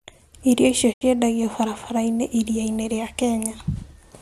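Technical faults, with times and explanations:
0.92–1.03 s, digital broadcast dropout: the receiver stopped getting usable frames, most likely from a lost signal or frames failing their checksum, and muted until clean data resumed. The speech fades out over about 20 ms, then leaves a hole of about 72 ms, which fits roughly three lost frames. When it returns, the programme has moved on, because whatever was broadcast during the mute was never decoded and cannot be recovered.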